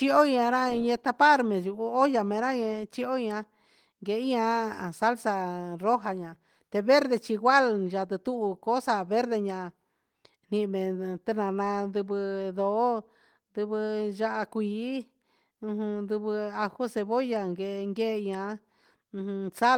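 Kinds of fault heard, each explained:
No kinds of fault are heard, so there are none to explain.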